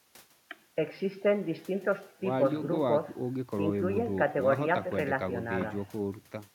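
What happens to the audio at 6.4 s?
Nothing goes wrong at 6.4 s: the speech plays through that moment intact, with no dropout, click or distortion.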